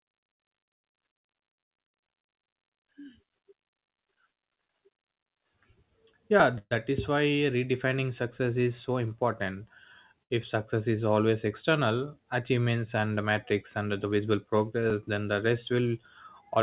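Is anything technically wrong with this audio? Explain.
Yes. This speech clip, carried over a call link whose narrow band with nothing above 4 kHz fits G.711 mu-law, has several transport and capture faults.

Dropped buffer (overrun), at 6.4 s, 10.43 s just before "success is always external", and 14.9 s just before "then the": each is a sudden jump in the sound. The likely cause is the capture side failing to collect samples before the hardware overwrote them, discarding roughly 10, 20 and 30 ms respectively and splicing the edges together.

Call audio freeze, from 6.58 to 6.73 s: the sound is extended as a fading buzz that ends in about 40 ms of silence. This is likely packets held up in transit, emptying the jitter buffer. The receiver filled 128 ms and then resumed where it stopped, adding a gap without losing anything.

Short stall from a late packet, from 10.23 to 10.32 s, right after "success is so important": one packet missed its deadline, so the receiver stretched the last sound for 73 ms until it arrived. 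Nothing is missing, but the sound is held too long with a slight buzz or dip.

Jitter buffer speed-up, from 13.78 to 14.27 s: the receiver's buffer had grown beyond its target, so it trimmed pitch-period-sized pieces repeatedly, about 70 ms in total. The speech runs at 112% speed at unchanged pitch, sounding briefly hurried.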